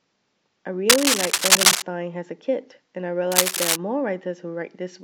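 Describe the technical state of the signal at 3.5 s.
A worn cable or connector being moved likely makes contact resistance flicker from 3.32 to 3.77 s, so cable scratch noise rustles over the speech, somewhat louder than it.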